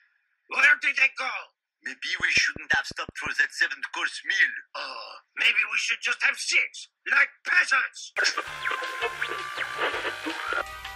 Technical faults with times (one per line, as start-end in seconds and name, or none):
2.20-3.28 train of clicks